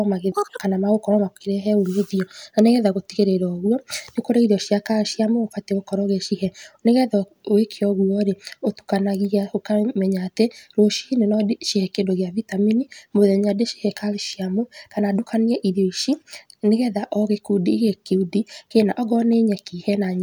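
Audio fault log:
0.32–0.60 s, audio read two samples at a time (double speed): this speech briefly runs twice as fast and an octave higher.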